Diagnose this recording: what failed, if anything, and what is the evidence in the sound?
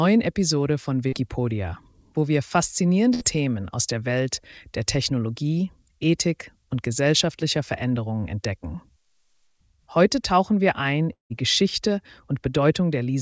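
Pre-emphasis left on, in the playback or de-emphasis stage: from 0.00 to 9.47 s the sound is bright and thin. The treble stays lifted by about 8 dB, matching an uncorrected CD 50/15 µs curve.

Short concealed packet loss, at the network stage: a brief smear at 1.08–1.14 s, where about 40 ms never arrived and the decoder extended the preceding sound.

Burst of packet loss, also network: at 3.14–3.23 s about 60 ms went missing. The receiver held and faded the last sound, then resumed further on with that stretch gone.

Long network dropout, likely the cause here: at 11.13–11.32 s the sound decays into silence, about 180 ms is lost, and audio returns further along, all through a G.722 call path.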